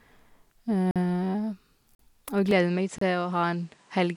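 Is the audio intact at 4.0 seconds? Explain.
No. From 2.51 s to the end of the speech, the input was likely switched to a poorer device. The sound is a few decibels quieter and duller, with nothing above 10.5 kHz and a new faint background noise. The spectrogram shows a flat ceiling, and the waveform shrinks abruptly without any gap.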